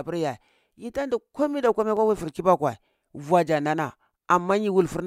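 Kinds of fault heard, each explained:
Clock drift buffer slips: a regular click recurs about every 1.27 s in this speech, roughly four times between 0.70 and 4.50 s. Each click is a small block of samples, around fifteen, being dropped or repeated. The likely cause is two clocks disagreeing by a few hundred ppm. Random dropouts would not fall at such an even interval.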